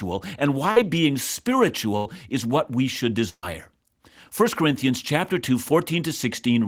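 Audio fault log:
0.71–3.44 s, burst of packet loss, three times: 0.71–0.77 s, 1.97–2.06 s just before "is what we should", and 3.29–3.44 s just after "is what we should". A short run of audio never arrived. The receiver stretched the last sound across each gap and faded it down, for about 46, 83 and 133 ms. The third gap fades to silence for about 60 ms. Playback then jumps ahead, dropping about 50, 80 and 140 ms.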